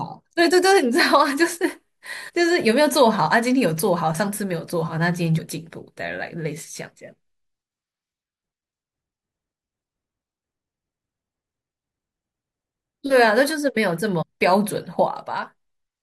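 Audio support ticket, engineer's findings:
Damaged data in a compressed stream: three short glitches in the speech, at 2.28–2.30 s, 5.38–5.40 s and 14.21–14.23 s, each about 22 ms. Probable component: decoder input, i.e. file or stream transport. Corrupted bytes in the encoded frames; decoder misparses them, loses frame sync and resyncs at the next valid header, leaving a brief glitch at each point. Check source file integrity and the delivery path.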